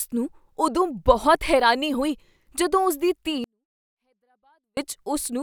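From 3.44 to 4.77 s a 24-bit alignment error occurs: 24-bit samples sitting in the low bytes of a 32-bit word are read as full 32-bit integers, scaling everything down by about 48 dB. The speech stays clean but falls abruptly to near-inaudibility.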